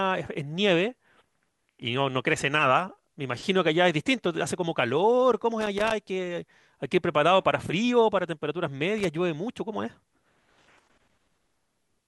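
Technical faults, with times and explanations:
5.61–5.92 s and 8.98–9.05 s, loose connector crackle: the speech is broken by two irregular bursts of scratchy crackle, the first lasting about 0.3 s and the second a short 70 ms flick. A worn or dirty contact somewhere in the signal path is making and breaking as it shifts, so the audio is chopped on and off in rapid, uneven steps. Any DC sitting on the line turns each break into a pop.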